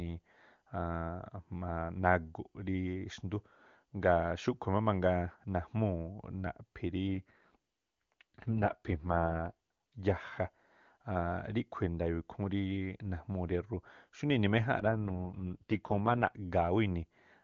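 Speech over an AMR wideband (HD Voice) link shows two AMR rate drops, from 7.08 to 9.99 s and from 14.79 to 16.37 s, where the voice turns rough and buzzy, consistent with the codec falling from 23.85 to 6.6 kbit/s on a weak radio link. On a spectrogram the band still reaches 7 kHz with no gap, but harmonics blur and the upper band grows grainy. The waveform stays continuous.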